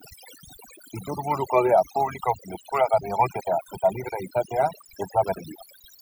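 From start to finish the speech has overdone noise removal: the reducer is clamping hard on any band near its noise estimate, taking quiet bits of the voice with it. Gaps drop to near silence with little twinkly specks.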